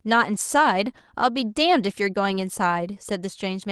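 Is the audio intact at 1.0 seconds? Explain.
Yes, the audio is intact at 1.0 seconds, with nothing there beyond the ordinary coding character of the call path it passed through.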